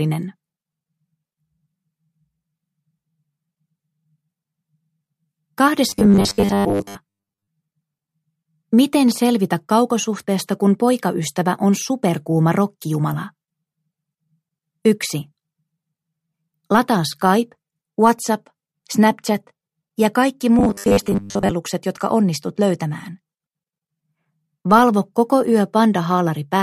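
From 5.89 to 7.49 s, and again from 20.59 to 21.51 s, the sound turns into a rigid, metallic buzz pitched at 100 Hz. This is robotic sound from repeated short buffers. The likely cause is audio arriving too seldom, so playback repeats the most recent fragment while the real signal is skipped. Repeats at 100 Hz fit a 10 ms buffer. Most of each stretch, roughly 70 percent, is repeated material, and only the loose contour of the sound survives.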